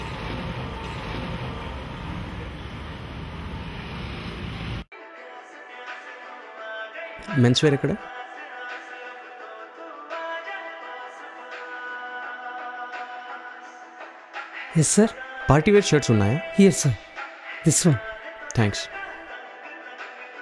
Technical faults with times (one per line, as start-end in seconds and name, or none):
none